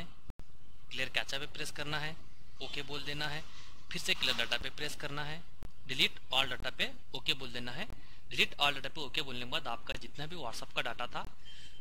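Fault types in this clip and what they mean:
Block of digital silence: chunks of the output simply drop to zero with hard edges, so each gap cuts out and back in abruptly. There's a roughly 93 ms hole near the start, an 8 ms tick, then five 23 ms dropouts, which fits a 1024-sample buffer missing its deadline.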